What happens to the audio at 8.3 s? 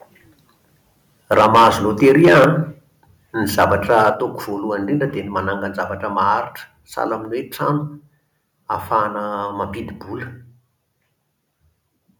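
Nothing goes wrong at 8.3 s; the speech runs on intact through that moment, with no dropout, click or distortion.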